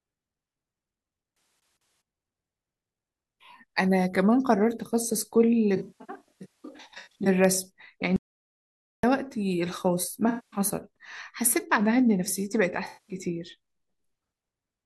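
At 8.16 s the speech just drops out to dead silence and stays there until 9.03 s, so you lose a bit under 0.9 s of it. That's an audio dropout to silence: not even room tone survives in the gap, which tells you the input itself vanished while the recording kept writing silence. Most likely a link hiccup or a momentary disconnect or mute upstream. Whatever was said in that stretch is simply gone.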